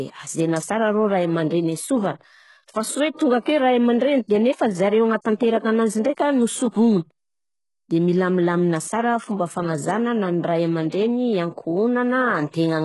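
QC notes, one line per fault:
Throughout: HE-AAC compression is the likely cause of the heavy damage, with gritty, lispy sibilants and metallic treble. The upper band is rebuilt from copied lower harmonics that misalign, which fits a bitrate near 12 kbps. A spectrogram shows blocky, repeated treble patches and nothing above 11.5 kHz.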